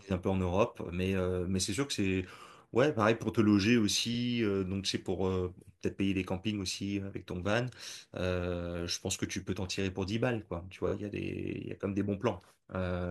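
At 4.14 s a repeated-frames glitch makes the speech stutter: a 46 ms chunk, which fits two compressed frames, plays twice. At 10.87 s a shorter 23 ms block plays three times, adding 46 ms.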